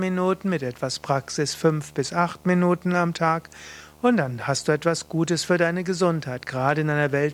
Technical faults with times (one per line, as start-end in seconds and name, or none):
0.00-7.34 video or display buzz